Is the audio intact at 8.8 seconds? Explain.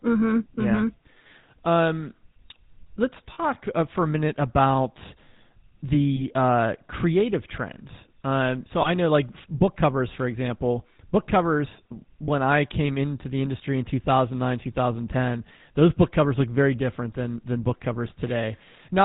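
No. From 8.82 to 8.89 s the sound briefly turns into a rough, metallic ring held instead of moving on naturally. These are lost GSM frames: when a frame fails to arrive, the decoder keeps reusing the last good frame's vocal-tract and excitation settings. The brief span fits a single 20 ms frame, so the ring is short and never fades fully to silence.

Around that moment, as everywhere in the clip, the audio has a plainly audible buzzy, gravelly roughness, and nothing above 4 kHz gets through. This is the GSM full-rate codec, which fits the 13 kbps full-rate coder. It rebuilds the sound by driving a vocal-tract model with regularly spaced pulses and keeps only every third excitation sample, which produces that grainy, band-limited texture.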